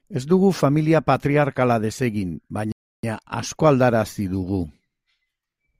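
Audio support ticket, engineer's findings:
Rebuffering stall in the playback path, 2.72 s to 3.03 s. The player's download buffer ran dry, so output halted until fresh audio arrived. The speech drops to silence for about 315 ms, then resumes at the exact point it stopped: no content skipped or repeated, just a gap that stretches total playback by roughly a third of a second. Probable component: network fetch or client buffer management.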